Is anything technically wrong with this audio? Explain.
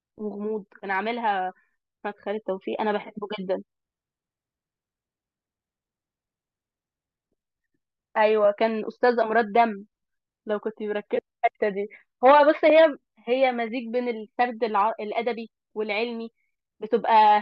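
No, nothing technically wrong stands out here; it's a speech recording with no faults to point to.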